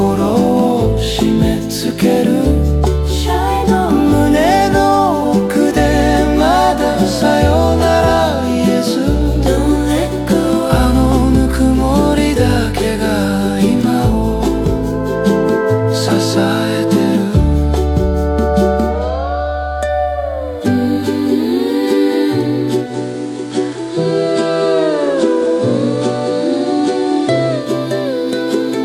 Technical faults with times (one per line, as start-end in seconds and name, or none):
22.80-27.73 digital radio blending to analogue